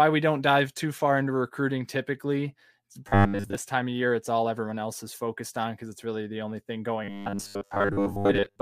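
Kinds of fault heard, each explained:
Robotic sound from repeated short buffers: the speech turns into a stiff, metallic buzz locked at 100 Hz, first from 3.09 to 3.55 s between "into recruiting typically the" and "time of year it's", then again from 7.04 s after "really the only thing" right to the end. The likely cause is audio arriving too seldom, so a roughly 10 ms chunk gets replayed over and over for most of each stretch while the real audio is skipped.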